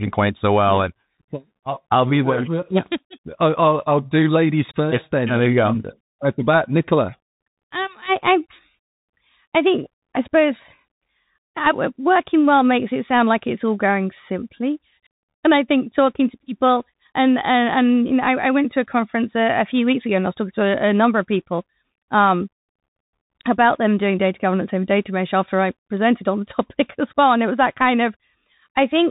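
Bluetooth CVSD headset codec damage runs through the whole speech clip, from start to finish. The speech has been squeezed through a one-bit delta modulator, which fits a 64 kbps CVSD link. Each sample only steps the signal up or down, with the step size adapting. Nothing above 3.8 kHz survives, so the speech sounds boxed in. Sharp, loud high content outruns the step and distorts, s sounds come out scratchy, and a grainy hiss sits beneath everything.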